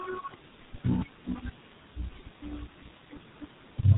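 From start to finish the speech carries heavy G.723.1 codec damage. Content above 3.8 kHz is absent, so the sound is muffled. At about 6.3 kbit/s, with long frames and a slowly updated voice model, rapid changes are smeared, leaving a hoarse tone and blurred consonants.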